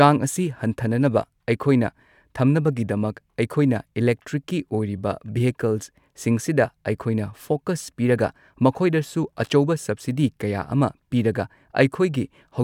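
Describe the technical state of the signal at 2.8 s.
At 2.8 s the speech signal is intact, with no audible technical fault at that moment.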